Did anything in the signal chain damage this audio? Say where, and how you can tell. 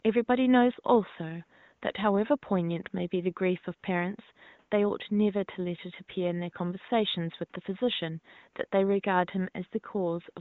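No, nothing in the chain has damaged this speech. The room noise sits about 48 dB below the voice, and the AMR wideband (HD Voice) coding sounds like one of its higher rates, leaving at most faint traces.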